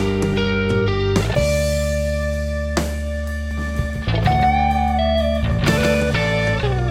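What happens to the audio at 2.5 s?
Nothing goes wrong at 2.5 s; the music plays through that moment intact, with no dropout, click, distortion or other fault.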